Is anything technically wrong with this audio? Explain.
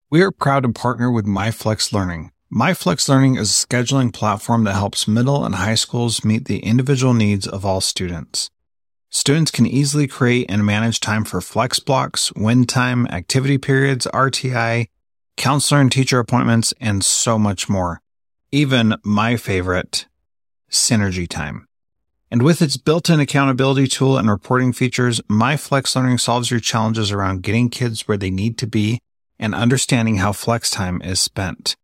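No, nothing technically wrong can be heard here.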